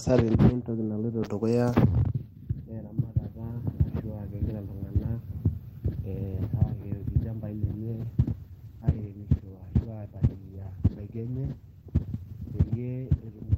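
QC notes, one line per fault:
8.03 s to 13.58 s, call bitrate drop. The encoder's bit budget falls and stays low to the end, for about 5.5 s. The coarseness fits a drop from roughly 32 kbps to 13 kbps. Opus must code the speech more coarsely, so it turns rough and watery. The top end also shrinks. The bandwidth falls from 20 kHz to 12 kHz, so the speech sounds duller and muffled.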